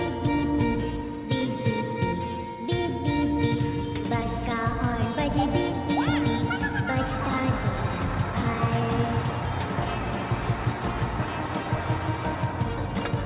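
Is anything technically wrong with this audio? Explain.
No, nothing here is technically wrong.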